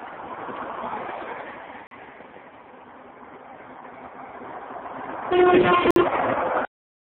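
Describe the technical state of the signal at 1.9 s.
Right at that spot there's a gap between stream segments, running from 1.87 to 1.91 s. The timestamps of two neighbouring chunks don't quite meet, so the player pads about 42 ms of silence in. You hear a clean, hard-edged dropout, though nothing actually goes missing.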